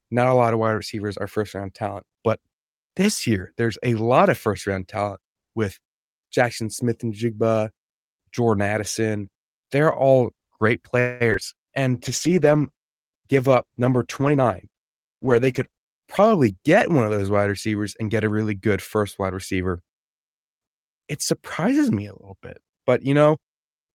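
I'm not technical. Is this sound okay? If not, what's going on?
No, there are several problems in this speech, all bunched into the middle of the call.

Call audio freeze, from 10.99 to 11.22 s. For about a fifth of a second the sound holds on and stretches out instead of moving forward, like a brief buzzy hang. This was likely caused by pieces of the call getting stuck in transit, so the receiving end ran out of sound to play and kept extending the last bit until the rest arrived. Nothing is lost, but a pause has been inserted.

Short concealed packet loss, at 11.30, 11.33 and 11.40 s. Right after the freeze come three tiny blips, each a few hundredths of a second long. Small chunks of the call never made it in time, and the receiver patched each hole by guessing from the sound just before it, then blended back in. You hear quick smears or wobbles, and a short sound there may be swallowed.

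Jitter buffer slow-down, from 11.74 to 12.28 s. The receiver was nearly out of stored sound, so it stretched what it had by repeating tiny slices over and over. For about half a second the speech plays at roughly 93% speed, slightly drawn out, with the pitch unchanged. This adds about 45 ms to the timing.

Call bitrate drop, from 11.95 to 16.61 s. The connection seemed to get squeezed, so the call switched to sending much less detail for nearly five seconds, at its worst for almost four. The voice sounds rougher and duller during that stretch, a bit watery and muffled, before it clears up again.

Jitter buffer speed-up, from 14.33 to 16.51 s. Later the receiver had too much sound waiting, likely after delayed pieces arrived together. It trimmed out tiny slices repeatedly to catch up, so for about two seconds the speech runs at roughly 110% speed and sounds a little hurried, still at normal pitch. 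About a fifth of a second is cut in total.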